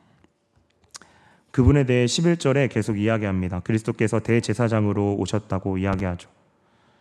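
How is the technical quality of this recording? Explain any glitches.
There's one glitch in this speech recording: a loud pop from about 5.93 to 6.02 s, two sharp clicks in quick succession, peaking a bit louder than the speech. It's likely a voltage spike from a plug, switch or static hitting the signal chain, while the speech carries on underneath.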